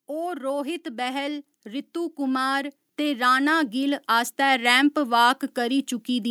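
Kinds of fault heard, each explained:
Automatic gain rising: The gain control judged the input too quiet and pushed its level up slowly. From 0.06 s to 4.78 s the speech and the background swell together. The overall rise is about 11 dB, spread over nearly five seconds.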